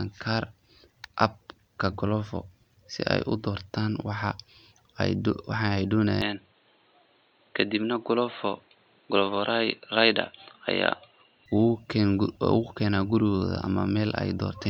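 From 6.22 to 11.46 s the input likely switched to a poorer device, removing everything above 4.2 kHz, so the speech turns dull, with a faint new background noise.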